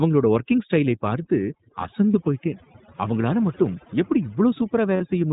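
Overdone noise removal runs through the whole speech clip. The reduction pulls any frequency band near the estimated noise floor far down, taking the quieter parts of speech with it. The background drops and breaks up into twinkling specks.

The iLBC codec also applies throughout. Its narrowband coding passes nothing above 4 kHz, and the damage is plainly audible. Speech stays clear but sounds rough and synthetic, with a frame structure that fits 20 ms frames at around 15.2 kbps.

Lost iLBC frames appear twice, first at 2.12 to 2.16 s, a 20 ms gap that fits one missing frame, then at 4.96 to 5.02 s, a 40 ms gap that fits two. Each time the decoder repeats the last pitch cycle blended with noise. The result is a brief held, faintly buzzy vowel, and the voice recovers almost immediately afterwards.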